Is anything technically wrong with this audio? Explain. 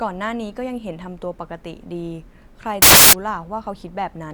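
Yes. From 2.82 to 3.13 s the speech is swamped by a burst of loud, harsh broadband noise lasting about 0.3 s. This is samples built from the wrong bytes: the decoder assembled each sample's bytes incorrectly, through a one-byte offset, swapped byte order or a misread alignment. The rapidly fluctuating low-order bits therefore landed in the most significant position and dominate every value.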